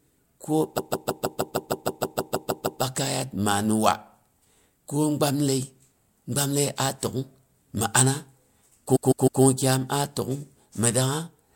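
Repeated frames occur from 0.77 to 2.81 s and again from 8.95 to 9.42 s, just before "kyom a". A 156.7 ms block of compressed audio, which fits a run of six frames, was stored or sent more than once, so the decoder plays the same slice again. The first stutters through 13 extra plays and adds about 2.04 s. The second repeats three extra times and adds about 0.47 s.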